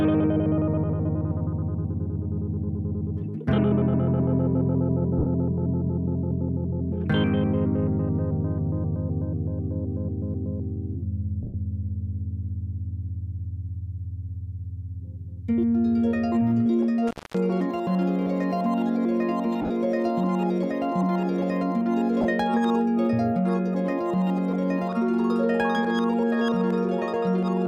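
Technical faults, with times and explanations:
5.19 to 5.26 s, 11.43 to 11.54 s, 19.62 to 19.70 s and 22.22 to 22.25 s, lost LE Audio frames. Gaps of 70, 110, 70 and 30 ms are filled by the decoder repeating the last spectrum with scrambled phase. Tones smear into noise. The 110 ms gap fades toward silence. At 19.6 s the losses are scattered over 80 ms, the longest run about 40 ms. The gap lengths fit 10 ms frames.
17.07 to 17.38 s, intermittent contact. A loose connection opens for about 238 ms. The sound drops out abruptly, with crackle where the contact breaks and remakes. Faint hiss fills the gap while the line is open.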